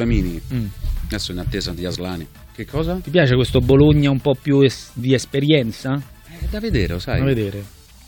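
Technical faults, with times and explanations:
4.98 s, damaged data in a compressed stream: a very short burst, roughly 10 ms, where the sound breaks into a brief chirp or blip before carrying on. Some of the encoded bytes at this point were corrupted or lost, so the decoder could not interpret the frame correctly. It produced garbled output for that instant, lost its place in the stream, then resynchronised on the next valid frame header.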